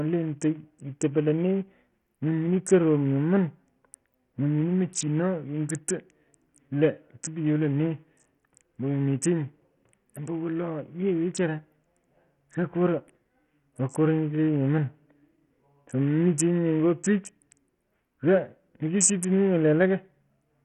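Throughout the clip, the speech has likely been through Bluetooth SBC compression with a very small bit pool, which fits a bitrate near 48 kbps. The starved upper sub-bands leave nothing above 13.7 kHz, and coarse quantisation lays heavy grit and aliasing over the sound.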